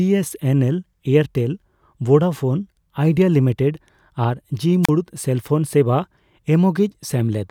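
A wireless microphone squelch dropout interrupts this speech clip from 4.83 to 4.90 s. The FM radio link fades, so the receiver's squelch briefly mutes the output. A short burst of hiss leads into a near-silent gap of about 34 ms before the voice returns.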